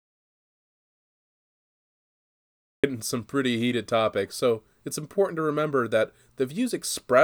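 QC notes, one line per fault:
0.00–2.84 s, audio dropout to silence: the clip opens in silence with no room tone, already under way at the start, and the speech comes in abruptly at 2.84 s mid-flow, likely because the input was lost while the recorder kept writing silence.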